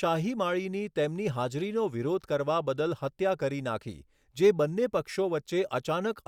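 No technical faults can be heard at any point in the recording.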